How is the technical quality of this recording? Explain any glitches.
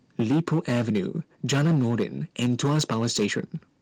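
The recording is impaired by repeated distortion on loud speech and one sudden level drop.

Microphone overload, 0.19–0.99 s, 1.49–2.03 s and 2.39–3.4 s: peaks run about 7, 9 and 8 dB past the converter's limit, likely from excessive input gain. Flattened tops give loud syllables a harsh crackle.

Microphone volume stepped down, at 0.22 s: the level drops about 2 dB in one step, likely the call software reducing input volume after the clipping.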